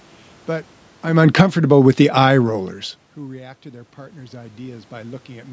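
Automatic gain falling, 1.02 to 2.82 s: after the talker shifts near 1 s, the gain control pulls its gain down about 9 dB, sinking speech and room noise together.

Automatic gain rising, 3.15 to 5.48 s: the talker moves near 3 s and the input drops about 21 dB. The gain climbs only about 6 dB, so level returns partway.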